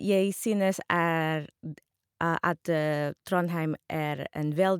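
No technical faults can be heard anywhere in the speech.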